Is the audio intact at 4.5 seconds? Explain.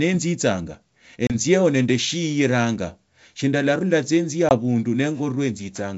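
No. Between 4.49 and 4.54 s there is packet loss on an ADPCM call: a couple of packets vanish into a hard-edged silence, and the decoder's predictor and step size fall out of step. Unlike a plain dropout, the speech returns slightly distorted before settling.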